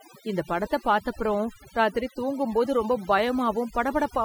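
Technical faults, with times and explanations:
Throughout, overdone noise removal: a noise reduction stage was pushed far too hard against a noisy recording, so any frequency band sitting close to its noise estimate is cut deeply or shut off entirely. The quieter parts of the speech fall under that threshold and are removed along with the noise, leaving the background lowered but scattered with twinkling specks.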